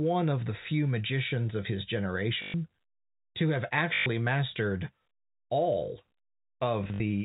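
A short robotic stutter is heard at 2.42 to 2.54 s, after "few magicians of his", and again at 3.94 to 4.06 s, after "to have". Scattered blips follow from 6.84 to 7.0 s. This is packet loss with last packet repeated: the receiver replayed stale audio, which fits 20 ms packets.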